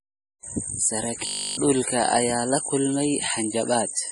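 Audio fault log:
Throughout: MP3 compression. The speech sounds watery and swirly, with a dull top end, and sibilants carry metallic chirps. This is likely heavy MP3 encoding at a low bitrate, which fits roughly 32 kbps. Short of bits, the encoder cut the treble at a fixed frequency and dropped quieter frequency lines that flicker on and off between frames, which produces the swirling and smears consonant attacks.
1.27 to 1.57 s: robotic sound from repeated short buffers. For these 0.3 s the voice turns into a rigid, metallic buzz at 50 Hz that still loosely tracks the speech, and essentially the whole stretch is affected. The likely cause is audio arriving too seldom, so playback kept looping the last chunk while fresh audio was skipped. A 50 Hz buzz points to chunks of about 20 ms, and each repeat stamps that fixed pitch onto the sound.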